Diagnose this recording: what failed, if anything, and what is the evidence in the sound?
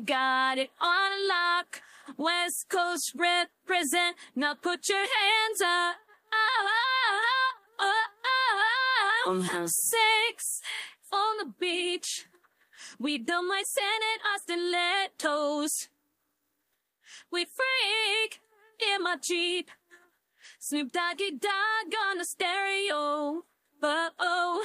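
Nothing in the recording points to a failure at any stage of the chain. There are no dropouts, glitches or distortion to trace back to a cause.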